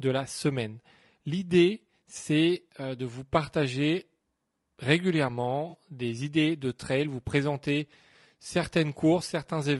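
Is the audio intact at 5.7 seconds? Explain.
No. From 5.69 to 5.75 s there is an AAC frame loss with concealment: about 40 ms of data went missing, which fits two lost frames, and the decoder filled the gap by extrapolating from the last good spectrum, leaving a brief smeared, noisy, phasey patch. The whole speech clip also carries plainly audible low-delay AAC compression damage, likely from AAC-ELD at 32 kbps. At that low bitrate, the sound at that moment is rough and grainy, with noise between harmonics and a thin, synthetic-sounding top band.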